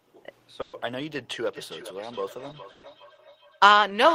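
It's a short speech clip with two problems. The first is a burst of packet loss at 0.61 to 0.76 s, repeated at 2.71 to 2.86 s. Each time, about 120 ms of audio never arrived, and the receiver covered the hole by stretching the last bit of sound it had and fading it out. You hear a short held buzz or hiss, then the speech jumps ahead with that stretch gone. The second is feedback echo between two devices, which starts around 1.46 s and runs to the end. It sounds like two endpoints sharing a room: one plays the other's microphone feed, that mic hears it again, and neither echo canceller can remove sound coming out of the other device's speaker. The speech returns roughly every 0.4 seconds, with the loudest repeat about 14 dB under the direct voice.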